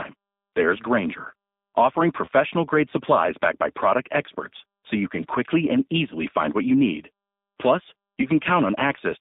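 Right from the start, the speech has that G.729 codec character: squeezed into a roughly 200 Hz to 3.7 kHz line band, with a plainly rough, synthetic edge.

At 2.25 to 2.29 s and again at 8.22 to 8.30 s, there's VoIP packet loss concealed by the speech codec. Each gap fits a single lost 20 ms packet, which the decoder fills with a short, fading stretch of the previous sound, heard as a buzzy tone or coloured noise.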